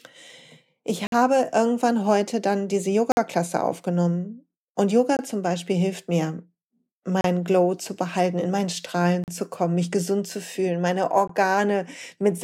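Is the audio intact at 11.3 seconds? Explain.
No. A gap between stream segments falls at 11.28 to 11.30 s, where the timestamps of two adjacent segments, which fits 2-second segmenting, leave about 19 ms unaccounted for. The player fills that hole with silence, so the speech drops out abruptly with hard edges, though none of it is lost.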